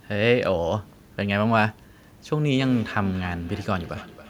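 From 2.33 s to the end, the speech carries a feedback echo between two devices: a second device in the room replays the call and this microphone recaptures it, uncancelled. Repeats arrive roughly every third of a second, about 18 dB below the speech, visible as faint, regularly spaced copies trailing each burst on the waveform and spectrogram.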